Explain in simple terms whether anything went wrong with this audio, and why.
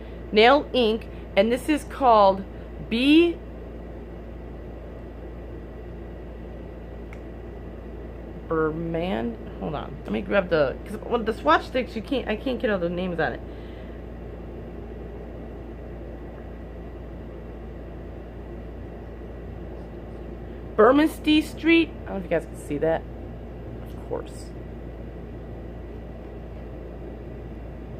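Nothing went wrong: the audio runs without any interruption, distortion or other technical problem anywhere in the recording.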